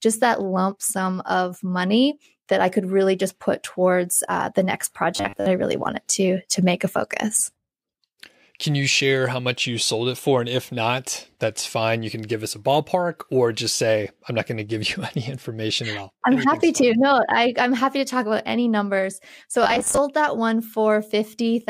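A speech recording in which playback likely ran short of fresh audio twice and filled each gap by looping the last 10 ms buffer, which is robotic sound from repeated short buffers. From 5.16 to 5.46 s most of the sound is replaced by these repeats, and from 19.64 to 19.98 s about half is. Each time the voice collapses into a rigid, metallic 100 Hz buzz that only loosely tracks the speech.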